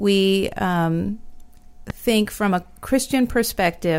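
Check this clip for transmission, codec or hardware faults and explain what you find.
One hardware fault is present. From 1.90 to 1.92 s, a loud pop: a voltage spike, likely from a switch or static discharge, enters the signal, giving a single sharp pop roughly 10 dB above the speech, which continues underneath.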